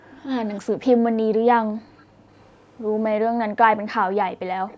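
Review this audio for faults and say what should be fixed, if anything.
At 0.0 to 0.11 s and again at 2.05 to 2.18 s the room background gets ducked hard, dropping by about 37 and about 40 dB, so you get brief holes of roughly 0.1 and 0.15 s. That's the background gated by the echo canceller, clamping the mic while far-end audio plays. A gentler suppression curve, or comfort noise to fill the gaps, would stop those dropouts.

There are faint delayed copies of the speech at 0.47 to 0.6 s, 1.97 to 2.8 s and 4.68 to 4.77 s, each trailing by about 325 ms and sitting well below the direct speech, quietest in the middle stretch. That's an echo leak, most likely from loudspeaker pickup the canceller didn't fully remove. Better loudspeaker–mic separation, a headset or a stronger echo canceller would keep that out.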